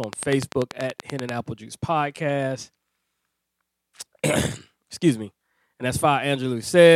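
Likely interference or a faulty connection injects a train of clicks from 0.04 to 1.30 s: about fifteen regular ticks at 10.3 per second, standing well above the speech.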